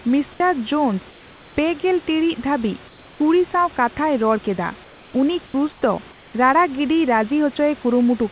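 Speech heard over a call path that cuts everything above 4 kHz, as G.711 would, has two faults. At 0.38 s the onset is clipped by the voice detector: about 20 ms is missing, so the sound starts abruptly, likely because detection lagged. That is unlike a dropout, since nothing is lost mid-sound. Comfort noise replaces the background at 1.1–1.56, 2.88–3.2, 4.84–5.14, 5.46–5.54, 5.72–5.82 and 6.12–6.34 s. The room noise becomes a flat, featureless hiss about 3 to 5 dB quieter, likely from discontinuous transmission. Unlike a noise gate, the pauses are filled rather than silent.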